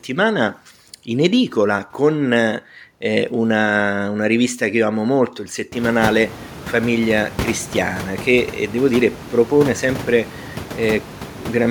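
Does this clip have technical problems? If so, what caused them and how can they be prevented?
No, nothing stood out on listening to this speech recording, and the background noise in the room, which grows noticeably louder about halfway through while staying well below the speech, is part of the recording rather than a fault of the system.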